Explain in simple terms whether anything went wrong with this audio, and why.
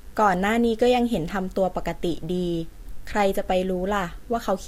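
Electrical interference from the mains supply, at 50 Hz, leaked into the recording chain, causing mains buzz. Sharp spikes twice per power cycle add a faint, steady, raspy buzz underneath the speech, running from start to finish with many overtones reaching well above the hum itself.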